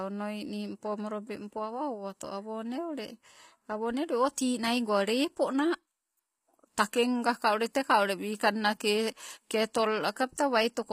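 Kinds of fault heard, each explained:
HE-AAC compression: The treble across the whole speech clip sounds rebuilt rather than captured. The likely cause is HE-AAC coding at a low bitrate, which fits something like 24 kbps. Only the lower spectrum is truly coded, and upper bands are copies of it shaped by a coarse envelope. The damage is plainly audible, with gritty, lispy s sounds. A spectrogram would show repeated, blocky high-band patterns and nothing above 15.4 kHz.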